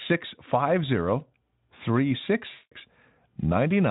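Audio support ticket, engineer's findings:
2.53–2.72 s, about 180 ms: speech smeared into a buzzy tone or coloured noise that fades out, not a silent gap. VoIP packet loss concealed by the speech codec (Speex path): the decoder repeats the last pitch and filter at falling gain.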